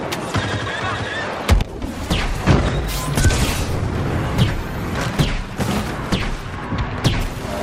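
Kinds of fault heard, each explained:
No technical faults can be heard in the audio.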